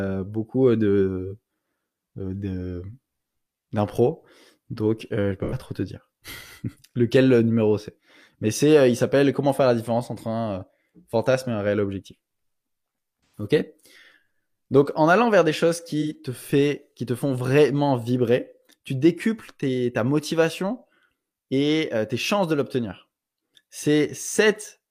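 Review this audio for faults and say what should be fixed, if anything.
AAC frame loss with concealment occurs at 5.44 to 5.54 s (after "je je", before "trop te dire"), 13.30 to 13.46 s, and 16.01 to 16.14 s (after "allant vers des choses"). Each gap, about 85 to 128 ms, fits two or three lost frames. The decoder fills the gap by reusing the last good spectrum, which produces a brief smeared, phasey patch. Protecting the AAC stream against packet loss, for example with forward error correction or retransmission, would prevent these dropouts.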